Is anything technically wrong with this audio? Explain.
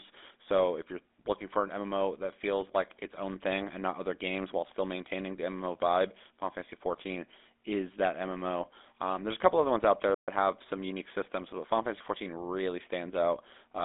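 Yes. Two problems are audible.

Throughout the speech there is a buzzy, gravelly roughness, and the sound is squeezed into a narrow telephone band of about 250 Hz to 3.6 kHz, with nothing above 4 kHz. This is GSM full-rate codec damage. The codec rebuilds the voice from a vocal-tract model driven by a sparse, regularly spaced pulse train, which fits a 13 kbps GSM full-rate stream.

From 10.14 to 10.28 s the speech cuts out abruptly in mid-flow and goes silent for 132 ms before carrying on. This is a playback stall. The player was likely starved of data or blocked briefly and output nothing until it recovered.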